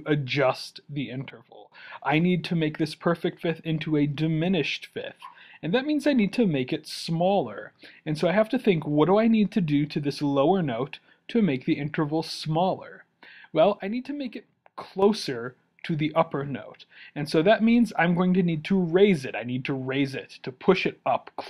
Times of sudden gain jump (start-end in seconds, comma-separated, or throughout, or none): 1.30-1.72, 13.79-15.02